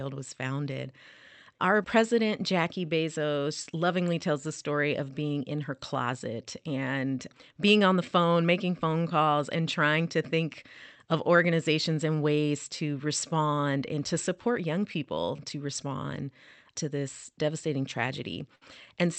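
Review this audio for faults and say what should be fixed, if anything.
The speech has clock drift between sender and receiver, with the sender's clock running about 5 percent slow. The receiver's jitter buffer keeps draining faster than it refills, so the pacing has to be patched continuously. A sender-side clock locked to a stable reference, or proper clock-skew compensation at the receiver, would prevent this.

Because of that drift, you get repeated timing corrections from 0.13 s to 18.01 s. Playback runs at about 95 percent speed, and the receiver keeps repeating tiny pieces to stretch things out, adding roughly a second overall. Fixing the underlying drift, or using smoother time-stretching instead of piece-repetition, would prevent this.

Near the end, at 18.55 to 18.62 s, there's a short stall from a late packet. The jitter buffer ran dry, so the last sound was held for 60 ms until the packet arrived, with nothing lost but a slight hold. 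A bit more jitter-buffer headroom would prevent this.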